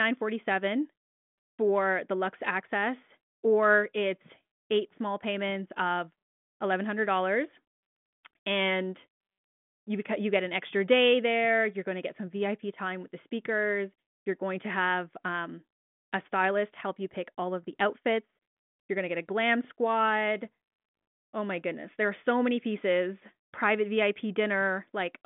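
The speech passes through a G.726 ADPCM telephone channel at 40 kbit/s, with the line band running from about 150 Hz to 3.5 kHz and nothing above 3.8 kHz, and the coding leaves at most faint traces on the sound.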